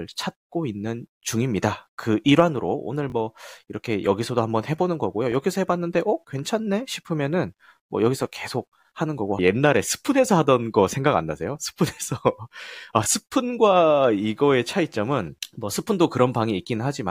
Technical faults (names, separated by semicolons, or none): repeated buffer